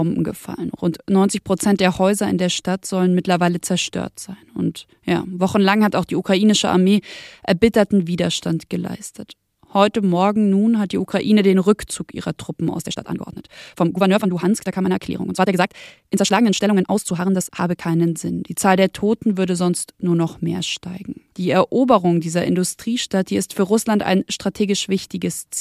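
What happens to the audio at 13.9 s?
The speech sits inside a time-stretched section from 12.80 to 17.82 s, running 1.72 times faster, likely from software dropping short pieces to keep pitch. It sounds rushed; a spectrogram shows unchanged harmonic spacing over compressed syllables.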